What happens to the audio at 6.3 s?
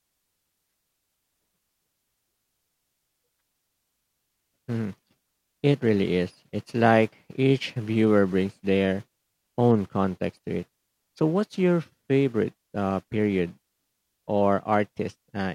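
Nothing goes wrong at 6.3 s: the speech runs straight through that moment with no dropout, click, glitch or other fault.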